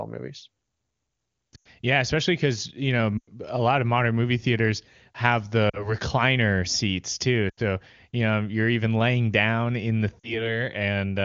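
Speech carried over AMR-WB at what sounds like the top rate of about 23.85 kbit/s briefly dips toward near silence at 1.55, 3.18, 5.70, 7.49 and 10.20 s. These are lost AMR speech frames: the decoder repeats the last good speech settings at falling level, for gaps fitting about 40 to 100 ms of missing audio.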